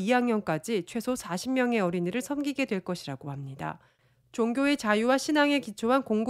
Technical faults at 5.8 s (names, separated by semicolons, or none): none